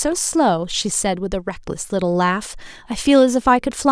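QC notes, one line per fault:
Nothing stood out on listening to the speech.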